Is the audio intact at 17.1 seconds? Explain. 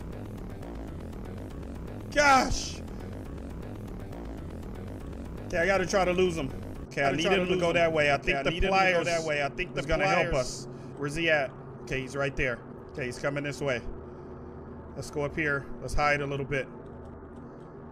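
Yes, the audio is intact at 17.1 seconds, with no fault to be heard at that point.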